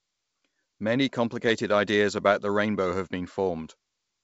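No technical faults can be heard in this speech, which is carried by G.722 wideband telephone coding at 64 kbit/s.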